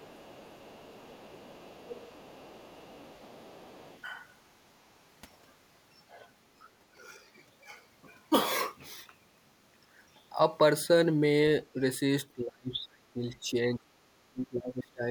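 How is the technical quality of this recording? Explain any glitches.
The recording has two echo-control problems: the far end bleeds into the opening, and the talker's own speech is pushed down near the end.

Other side's voice leaking through, 0.0 to 4.02 s: the device likely plays the far end on a loudspeaker and its echo canceller fails to subtract all of that sound from the microphone signal. The leftover second voice sits faintly underneath, around 25 dB below the main speech.

Speech suppressed in double talk, 12.35 to 13.84 s and 14.28 to 15.08 s: with both sides likely talking at once, the echo canceller cannot separate its own talker from the loudspeaker echo and turns everything down. The main speech sinks by as much as about 30 dB in the first stretch and about 25 dB in the second, dipping and breaking up rather than staying level.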